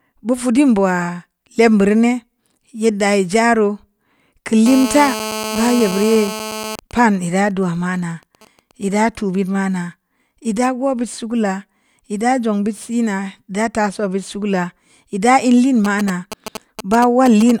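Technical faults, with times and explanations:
4.66–6.76 s, GSM phone buzz: a hard, raspy buzz at 217 Hz, about 9 dB below the speech, with a dense stack of harmonics. A nearby 2G phone in a call transmits steady radio bursts that the audio circuitry rectifies into audible pulses, independent of the speech.
6.79–8.83 s and 15.85–17.51 s, GSM signalling bursts: faint even ticks with a longer 217 Hz buzz twice a second in the first stretch, and a much louder galloping dit-dit-dit of brief 217 Hz buzzes, roughly 10 dB below the speech, in the second. The phone sends only short burst groups, first while its user is silent in the call, later while signalling, and the circuit rectifies each group.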